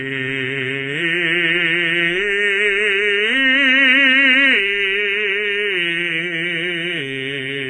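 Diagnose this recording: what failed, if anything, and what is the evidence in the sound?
Codec stage: the music sounds dull throughout, with nothing above 9.5 kHz, likely AAC compression squeezed to about 24 kbps, pulling its cut-off down.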